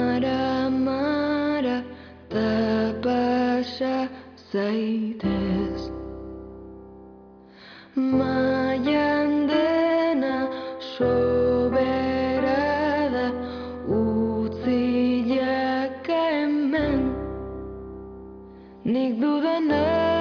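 No technical faults can be heard anywhere in this recording.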